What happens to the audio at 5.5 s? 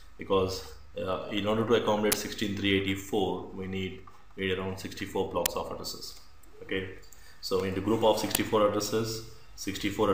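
An uninitialised buffer plays out at 5.46 s. A block of audio was sent to the output before any samples had been written into it, so whatever stale data sat in that memory was read and played as if it were sound. The result is a loud crack lasting about 5.8 ms, a length that fits a 256-sample buffer, cutting abruptly into the surrounding audio and out again.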